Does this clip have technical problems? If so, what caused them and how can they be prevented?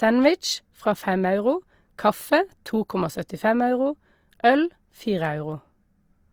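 Yes. Throughout the speech, the sound is rough and grainy, with fine detail turned noisy rather than hollow or swirly. This is likely Opus compression in its music (CELT) mode at a low bitrate, around 24 kbps: short of bits, the encoder fills bands with folded or noise content. Encoding at a higher bitrate would prevent it.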